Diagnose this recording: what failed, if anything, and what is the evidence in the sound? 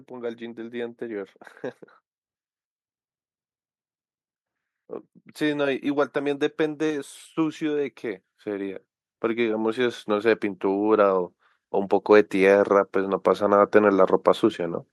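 Automatic gain rising, in the call-processing stage. From 5.38 s to 14.87 s the speech and the background noise swell together, by about 16 dB overall. The AGC judged the input too quiet and kept raising its gain gradually over that span.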